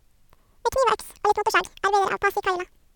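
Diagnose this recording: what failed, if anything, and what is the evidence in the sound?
A sample-format conversion fault: the audio was read two samples at a time (double speed). The reader treated each pair of samples as a single frame, as if the stream were stereo or twice as wide per sample, so the speech plays at 2x speed and a full octave, 12 semitones, higher from start to finish. Discarding every other sample also folds upper frequencies back down.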